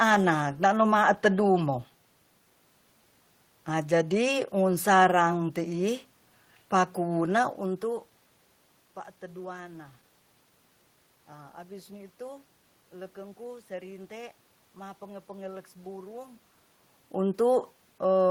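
Nothing stood out on listening, and the background room sound and the changes in level around the middle and near the end, as the talker moves relative to the microphone, belong to the recording itself.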